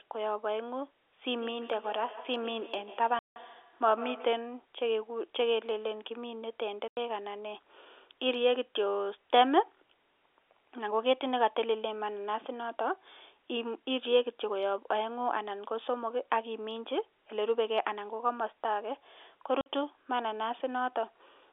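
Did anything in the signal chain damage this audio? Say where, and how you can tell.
Yes. The first damage is feedback echo between two devices, a call-processing fault. From 1.34 to 4.54 s each stretch of speech returns at a steady interval of roughly 150 ms. Every pass sounds thinner and more ringing, and the loudest repeat sits about 14 dB below the direct speech. Two devices in one room share the call. One device's microphone picks up the other's loudspeaker, and neither echo canceller removes sound played by the other device.

The second is packet loss filled with silence, a network fault. Hard-edged holes appear at 3.19 to 3.36 s (170 ms), 6.88 to 6.97 s (90 ms) and 19.61 to 19.66 s (50 ms). All three lengths are multiples of 10 ms, which fits 10 ms packets. The receiver played nothing where packets never arrived. The first gap falls inside the echo passage. The narrow telephone band of the G.711 line is audible throughout.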